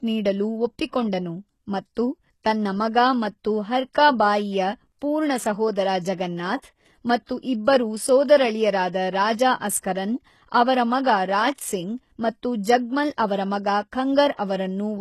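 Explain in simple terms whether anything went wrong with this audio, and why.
HE-AAC compression damage runs through the whole speech clip, from start to finish. The treble sounds artificial: s sounds come out gritty and metallic, and nothing is heard above about 12.3 kHz. The cause is likely heavy compression with this codec. It keeps only the lower frequencies and fakes the treble by copying those lower bands upward, so the high end no longer matches the true harmonics of the speech.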